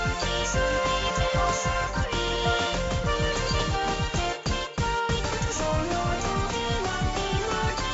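Nothing technical goes wrong anywhere in the audio, so there's no fault to point to here.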